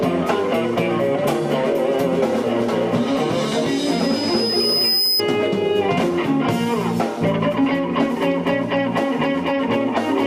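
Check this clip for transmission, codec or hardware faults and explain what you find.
One fault stands out: a loudspeaker feedback squeal from 3.68 s to 5.22 s. A microphone is picking up the speaker it drives, and at 5 kHz the loop gain tops unity, so that frequency keeps reinforcing itself. It swells over roughly a second and a half into a piercing whistle that ends up about as loud as the rest of the sound. On a spectrogram it shows as a thin horizontal line at 5 kHz that brightens steadily before stopping abruptly.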